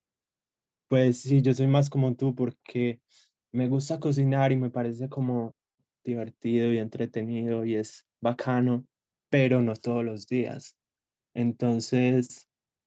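No technical faults can be heard in the speech. It has the narrowed sound of a call, with nothing above 8 kHz, which fits an Opus link at about 40 kbps carrying its usual coding noise.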